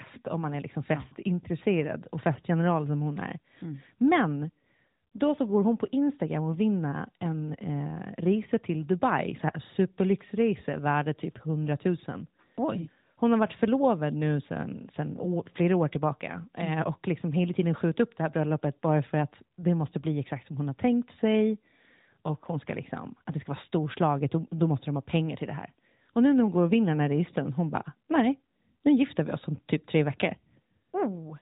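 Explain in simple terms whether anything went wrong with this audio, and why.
Nothing went wrong here; the audio has no faults.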